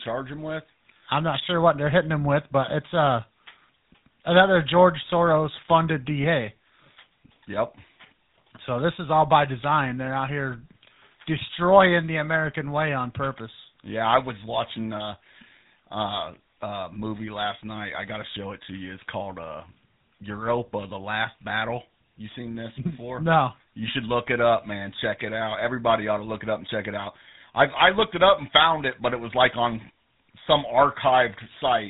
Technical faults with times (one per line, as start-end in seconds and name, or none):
0.00-31.89 GSM full-rate codec